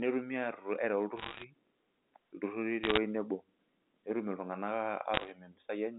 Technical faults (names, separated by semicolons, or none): bit errors on a digital phone line